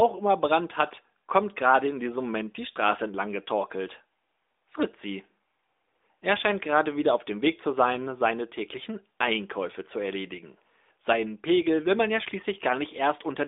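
Nothing goes wrong anywhere in this one; the speech simply carries the narrow, phone-line band of an AMR narrowband mobile call, with nothing above about 3.8 kHz.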